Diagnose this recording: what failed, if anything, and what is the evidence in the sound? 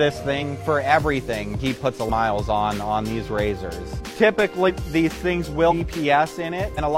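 The audio jumps forward abruptly at 0.38, 2.05, 4.65, 5.67 and 6.74 s. The skips are roughly 50, 300, 300, 500 and 200 ms. This is compressed frames skipped, a codec or storage failure. Whole 46.4 ms frames were missing or rejected as damaged by the decoder, so playback leapt ahead by whole-frame multiples.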